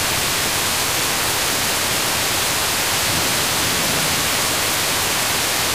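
No technical faults can be heard anywhere in the audio, and the signal stays intact and steady throughout.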